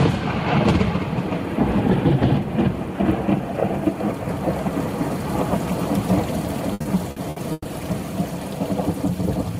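From 6.73 to 7.67 s the sound suffers repeated stalls (stutter): packets reached the receiver more slowly than playback consumed them, so its jitter buffer emptied five times. Each gap, the longest about 130 ms, was bridged by extending the last sound, adding roughly 340 ms in total, about a third of that stretch, while nothing is lost. The audio drags and hiccups. A spectrogram shows smeared, repeated frames, with fading patches in the longer gaps.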